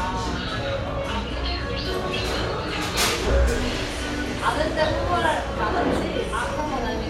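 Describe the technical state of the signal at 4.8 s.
At 4.8 s the audio is intact, with no dropout, clipping, glitch or other fault in the signal.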